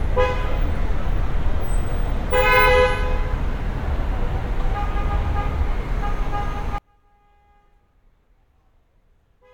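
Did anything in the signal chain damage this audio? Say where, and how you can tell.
Yes. One channel inverted, from 6.78 s to the end at 9.53 s: the sound abruptly falls by about 36 dB and turns faint. That points to one side of the stereo pair flipped in polarity, likely from reversed conductors in the analogue wiring, so when the two channels are summed to mono their shared content cancels almost completely. What remains is only the small difference between the channels, leaving a faint residue instead of the full signal.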